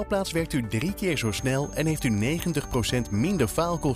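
From 1.02 s to the end, a thin whistle near 6.4 kHz sits well below the sound. It swells and fades slowly in level. This is a feedback whistle. The likely cause is a loudspeaker-to-microphone loop held just at the edge of feedback, ringing on one tone.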